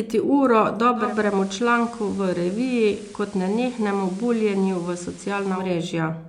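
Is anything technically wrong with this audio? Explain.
Yes. From 0.94 to 5.72 s, digital radio blending to analogue: the receiver cross-fades over 226 ms to FM, bringing hiss and a level drop of about 1 dB, unlike a plain filter.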